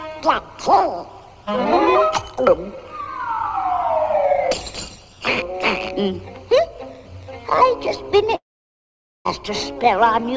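Audio heard through a call link whose content stops at 8 kHz, which fits G.722 at 64 kbps. From 8.36 to 9.27 s the sound fades into a brief buzz, then silence, before resuming with material missing, likely a long network dropout.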